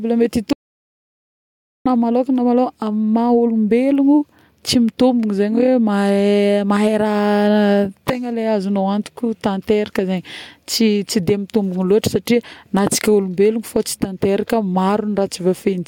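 Audio dropout to silence from 0.53 to 1.86 s in this speech recording: the sound cuts off abruptly and returns mid-flow after about 1.33 s of silence, with no room tone. The likely cause is a lost input, such as a disconnected device, failed link or accidental mute, while recording continued.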